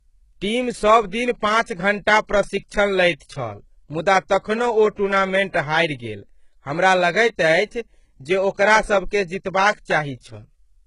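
A speech recording with heavy low-bitrate codec damage throughout. The treble is bright but synthetic: s sounds come out gritty and metallic, and nothing sits above about 11.1 kHz. This is likely HE-AAC compression, with the upper band rebuilt by spectral band replication at a bitrate near 12 kbps. There is also pre-echo from 5.50 to 5.54 s, just before "हारि गेल हमरा लगैत". A 45 ms smear of hiss runs ahead of the attack because quantisation noise sized for the loud onset has spread back across the quiet start of its transform block.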